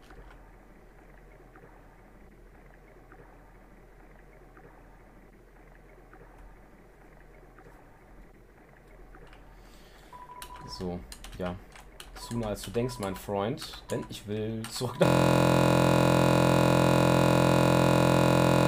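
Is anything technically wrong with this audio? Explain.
Yes. A system hang loop starts at 15.06 s and runs to the end: the system froze while the audio hardware kept replaying one 23.22 ms slice of its ring buffer, which fits a 1024-sample buffer. Repeating 156 times, it becomes a steady 43.1 Hz buzz.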